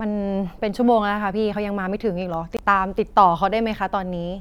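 At 2.57 s the speech drops to complete silence for about 21 ms, resuming at 2.59 s with no fade on either side, so the gap registers as a brief hard dropout rather than a dip in level. This is a Bluetooth stall. The likely cause is radio interference delaying packets long enough for the headphones' playback buffer to empty, leaving the output silent until retransmitted audio arrived and playback continued.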